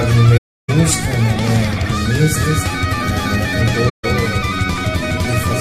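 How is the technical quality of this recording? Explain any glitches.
The recording has three faults: two dropouts and a delayed duplicate that persists from mid-clip to the end.

From 0.37 to 0.70 s, and again from 3.89 to 4.05 s, there is AAC frame loss with muting. Runs of coded frames went missing, and the decoder replaced their spectrum with silence. The first gap, about 320 ms, fits roughly fifteen lost frames. The second, about 150 ms, fits roughly seven. The overlapping transform windows fade the sound down into each hole and back up, so the gaps have soft edges.

From 2.36 s to the end, a doubled audio track appears. A second full-band copy of the sound enters abruptly, trailing the original by roughly 0.3 s at about 5 dB lower. This is likely the same signal being captured again through a slower path and mixed back in. The copy carries no decay or room colouring, so it sounds like a distinct, clean repeat rather than an echo.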